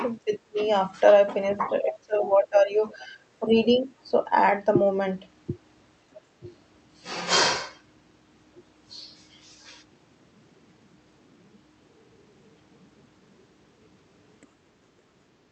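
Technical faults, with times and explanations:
0.25–0.61 s, 1.51–2.82 s, 2.98–3.20 s, 3.40–3.55 s and 6.40–6.46 s, speech suppressed in double talk: the speech dips by up to about 25 dB, deepest early on, likely the echo canceller ducking the talker while the far side also spoke.
1.90–1.96 s and 14.41–14.47 s, other side's voice leaking through: brief scraps of a second voice, about 15 dB below the speech at first, then a faint trace about 35 dB down, likely residual loudspeaker echo the canceller missed.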